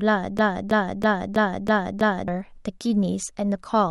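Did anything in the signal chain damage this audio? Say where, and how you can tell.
Yes. A broken-record loop runs from 0.39 to 2.28 s. A 0.32 s fragment of speech repeats six times, back to back and identical. That points to the playback or stream buffer. It likely stalled and kept resending its last fragment, so the intended audio was lost.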